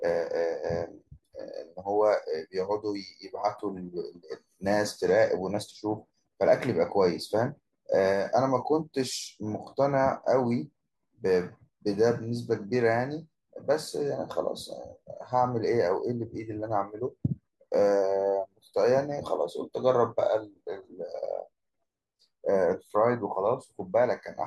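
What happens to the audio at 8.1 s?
Nothing goes wrong at 8.1 s; the audio is intact there, with no dropout, click or distortion at that point.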